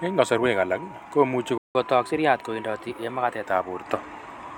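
Speech, with a playback stall at 1.58 s: the sound just cuts out for about 171 ms and picks up again at 1.75 s, most likely because the player ran dry of buffered data or its thread got held up. Right after that comes a catch-up at higher speed from 1.75 to 3.46 s. The player resamples its backlog to run at 1.1 times normal speed, so the speech comes out quicker and about a semitone and a half higher until it settles back to normal.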